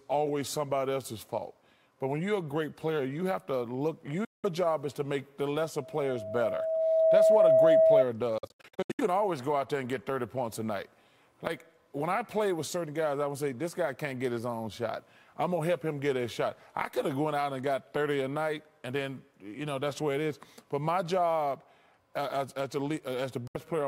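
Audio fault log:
4.25–4.46 s, Bluetooth dropout: the audio cuts to silence for about 0.2 s, then resumes further along as though it had kept playing. Packets likely failed to reach the headphones in time and were discarded, a gap that fits roughly eight lost frames.
5.76–8.05 s, loudspeaker feedback squeal: a steady 645 Hz tone rises out of the sound over a second and a half or so, swelling to roughly 10 dB above it before stopping. A microphone is hearing the loudspeaker it drives, and at 645 Hz the loop gain exceeds one, so that single frequency keeps feeding itself and grows.
8.38–9.01 s, Bluetooth dropout: over about 0.6 s the audio stutters through a string of short silences totalling about 0.37 s, none longer than about 70 ms. This likely comes from a burst of late or dropped wireless packets, in line with some sixteen frames going missing.
23.47–23.57 s, Bluetooth dropout: a brief hole of about 70 ms, with the audio picking up later in time rather than where it stopped, likely from a few packets not arriving at the headphones.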